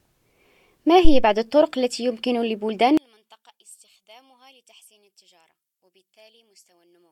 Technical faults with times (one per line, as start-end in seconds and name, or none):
1.05-1.26 phantom power thump
2.97-7.11 one channel inverted